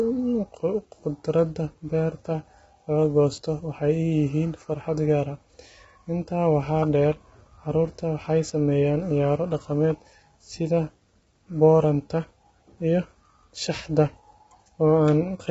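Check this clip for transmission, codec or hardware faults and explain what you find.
One fault runs through the whole speech clip: likely low-delay AAC compression at a very low bitrate. Too few bits starve the harmonics, so the voice sounds rough and grainy, noisy between harmonics, with nothing above 7.8 kHz, which fits about 16 kbps.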